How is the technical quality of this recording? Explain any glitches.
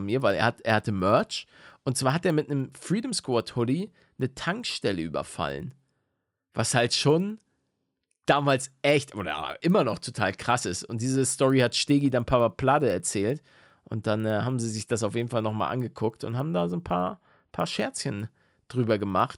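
The speech carries one technical fault running through the whole recording. A resampler restarted on every block, converting 24 kHz to 48 kHz in 100 ms chunks with no shared history, so each block edge gets a small discontinuity. The result is a steady 10 Hz ticking that rides along whenever speech is present and drops out in the gaps.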